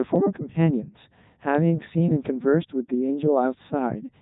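Speech throughout carries a Codec 2 vocoder sound: robotic, buzzy, nothing above 3.8 kHz, rebuilt from sine waves rather than smeared like a waveform codec, fitting a 3.2 kbit/s mode.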